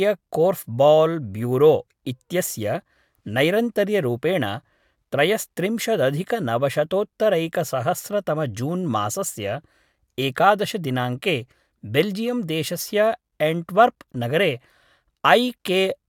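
No technical faults can be heard in this recording.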